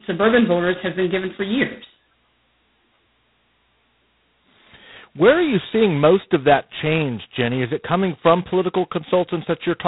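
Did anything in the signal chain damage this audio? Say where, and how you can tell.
Yes: G.726 ADPCM at the codec stage throughout. Coarse two-bit prediction errors leave a rasping hiss that follows the speech level. Nothing passes above 3.9 kHz, which fits the telephone band.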